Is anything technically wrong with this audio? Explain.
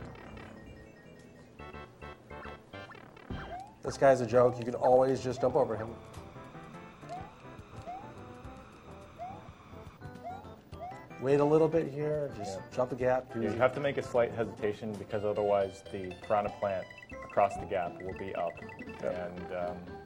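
Yes. From 9.68 to 15.68 s the adaptive stream drops to a lower bitrate. Quality changes abruptly without a gap and codec artefacts rise, consistent with roughly 32 kbit/s HE-AAC replacing 96 kbit/s AAC.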